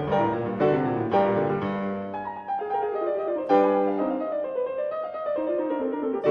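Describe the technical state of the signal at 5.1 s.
At 5.1 s the music comes through intact, with no dropout, glitch or distortion at that moment beyond the ordinary coding character of the call path it travelled through.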